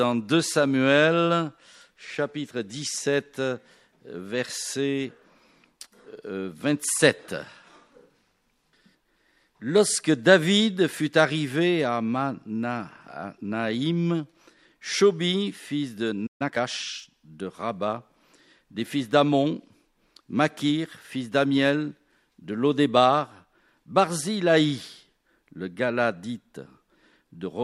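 At 16.26 s the sound stops dead for about 134 ms, until 16.42 s. This is a playback stall: the output falls silent in mid-flow, most likely because the player ran short of buffered data or its output thread was briefly blocked.

From 16.42 to 16.68 s a time-compressed catch-up follows. The player works off the delay it built up by removing small fragments and cross-fading across the joins, so this stretch plays at about 1.5 times normal speed. The pitch stays where it was, which separates it from a plain speed-up or sample-rate error that would raise the pitch. What gives it away is the hurried pace.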